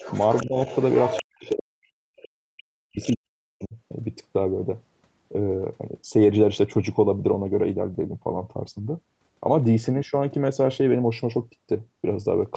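From 0.0 to 1.23 s a second voice sits only about 10 dB under the speech. This is the other side's voice leaking through, likely because the echo canceller left loudspeaker sound in the microphone signal. Between 0.42 and 0.59 s the speech dips by about 15 dB. From 1.23 to 2.17 s and again from 2.5 to 3.76 s it is pushed down much harder, by as much as 40 dB, so it almost disappears. This is speech suppressed in double talk, likely the canceller turning down both voices while the two sides overlapped. Faint scraps of the far voice, about 25 to 30 dB down, still slip through at 1.45 to 1.54 s, 2.17 to 2.28 s and 3.02 to 3.16 s.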